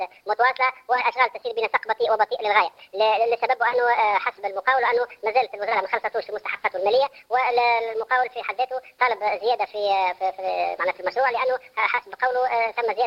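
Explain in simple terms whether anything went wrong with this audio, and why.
The audio was played back at the wrong sample rate: it was replayed faster than it was captured, with nothing in between to adjust for the difference. The sound points to a recording made at 32 kHz and played at 48 kHz. As a result, the whole clip, from the start through to its end at about 13 seconds, runs 1.5 times too fast, and everything sounds about seven semitones higher, bright and hurried.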